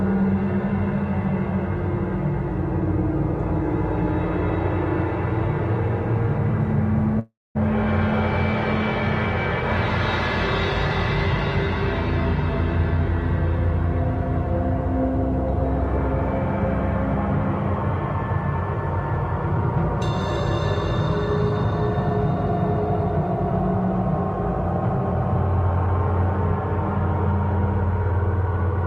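The audio comes over a call path whose Opus coding limits content to about 12 kHz, consistent with a bitrate near 32 kbps. From 7.19 to 7.57 s there is a call audio freeze. The last sound carries on as a decaying tail, then about 230 ms of silence, and the audio resumes exactly where it left off. That points to a 356 ms stall, likely from held-up packets draining the jitter buffer. Unlike a dropout, nothing is lost; the gap is inserted. From 28.12 to 28.75 s a jitter buffer speed-up plays the audio at about 107% speed, trimming roughly 50 ms in small pitch-period cuts. The sound feels hurried but keeps its pitch, which distinguishes it from a resampling or pitch-shift error.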